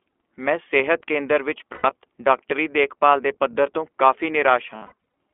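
This speech clip has passed through the iLBC codec, whose narrowband path keeps only about 300 Hz to 3.4 kHz. The coding damage is plainly audible as a thin, slightly rough and synthetic voice, a texture that fits the 15.2 kbps, 20 ms frame mode. Each frame's excitation is coded on its own. Lost iLBC frames cause two dropouts. From 1.74 to 1.86 s about 100 ms of audio, which fits five consecutive frames, is replaced by the decoder repeating the last pitch cycle with added noise, giving a brief held, buzzy vowel. From 4.76 to 4.92 s losses totalling about 220 ms are scattered across roughly 380 ms, with the longest run around 70 ms, so the voice stutters between short concealed buzzes. Because iLBC frames don't depend on their predecessors, the voice is right again almost immediately after each loss.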